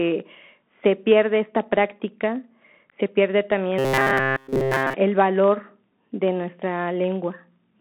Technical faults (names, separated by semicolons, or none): Bluetooth CVSD headset codec; robotic sound from repeated short buffers